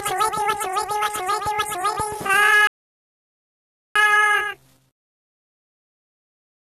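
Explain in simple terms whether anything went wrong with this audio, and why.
The player ran out of downloaded audio and paused to wait for more, a rebuffering stall: silence from 2.67 to 3.96 s, then the sound resumes exactly where it stopped.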